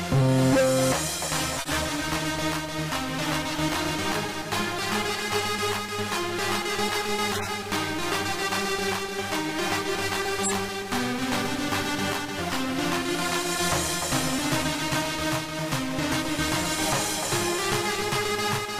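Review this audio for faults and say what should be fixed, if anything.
Three runs of corrupt frames were decoded and played. The first runs from 1.56 to 1.75 s, the second from 7.32 to 7.48 s, and the third from 10.43 to 10.53 s. Each spans a few codec frames. Flipped bits made the decoder misread gains and codes, so energy lands at wrong frequencies. The result is a short chirp or noise burst peaking around -10 to -15 dBFS. To prevent this, add error detection so damaged frames are concealed instead of decoded.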